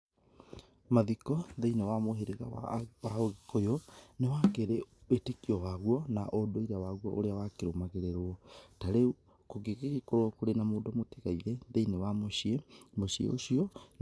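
No technical faults are audible anywhere in the speech.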